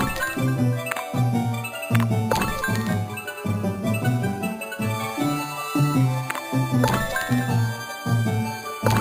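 The sound carries imaging from sample-and-hold upsampling from start to finish: a bright, metallic fizz sits above the content and rises and falls with its level. The lowest mirror image of the spectrum occupies roughly 5.5 to 11 kHz at about 18 dB below the signal, and it moves opposite to any pitch movement. This points to audio at about 11 kHz raised to 44.1 kHz by repeating each sample without an anti-imaging filter, leaving copies around each multiple of the old rate.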